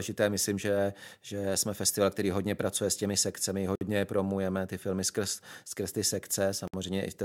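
At 3.75 s, right after "pracuje s těmi sekcemi", the speech drops out for about 56 ms before resuming with "promujeme ty filmy skrz"; a second dropout of about 60 ms follows at 6.68 s. Both are gaps at a join of encoded pieces: separately encoded segments were butted together with their encoder start delay and final-frame padding left in. On a waveform each shows as a flat stretch with smeared edges; a spectrogram shows a vertical blank band.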